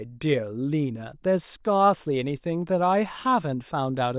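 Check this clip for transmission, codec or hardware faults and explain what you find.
No fault can be heard anywhere in this speech recording. Nothing in it calls for further explanation.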